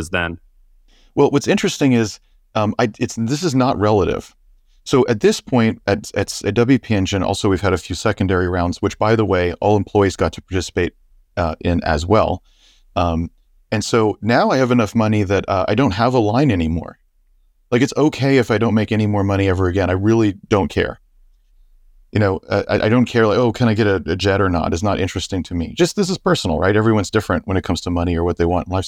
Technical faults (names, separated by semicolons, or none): none